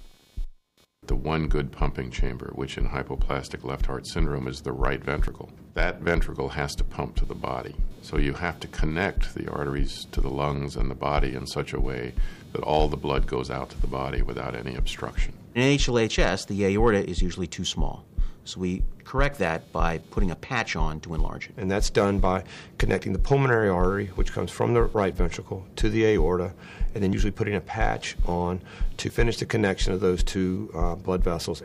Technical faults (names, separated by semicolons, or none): computer activity noise